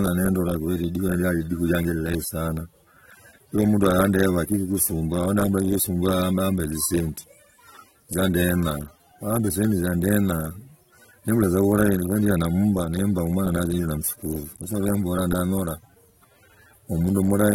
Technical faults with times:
0.00-17.55 AAC compression

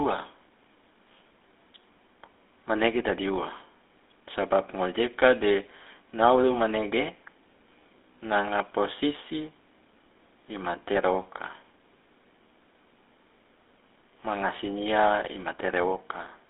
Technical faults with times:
0.00-16.49 GSM full-rate codec

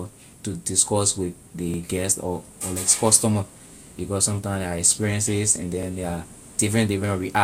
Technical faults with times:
1.74-1.78 overlapping chunks
5.83-5.87 overlapping chunks

